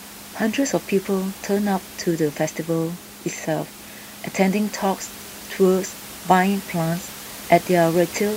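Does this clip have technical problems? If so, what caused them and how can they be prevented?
No technical problems.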